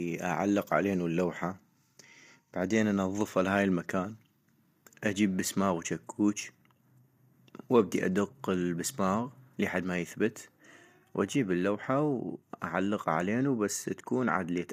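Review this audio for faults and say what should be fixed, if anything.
Throughout, the speech is rough and grainy with noise filling the gaps between harmonics, likely low-delay AAC compression whose short frames resolve pitch poorly at what sounds like about 32 kbps. A spectrogram shows smeared harmonics and nothing above 15.6 kHz. To prevent it, use a higher bitrate or a longer-frame codec when low delay isn't needed.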